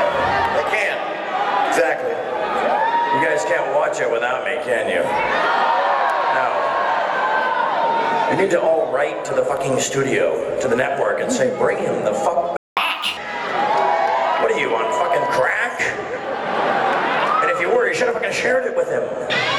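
At 12.57 s the sound cuts out mid-flow and stays silent for about 200 ms, until 12.77 s. This gap is most likely a playback stall, where the player ran short of buffered data or its output thread was held up and it fed silence to the output.

From 12.77 s to 13.17 s the player is catching up at higher speed. It resamples its backlog to run at 1.5 times normal rate, which recovers the 200 ms it lost. Because this is resampling and not time-stretching, tempo and pitch rise together, by roughly seven semitones, giving a brief chipmunk-like lift. That coupling and its short burst right after the silence set it apart from a pitch-shift fault. Normal speed returns at 13.17 s.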